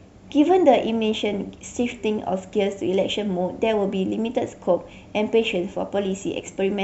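No technical faults can be heard anywhere in the speech.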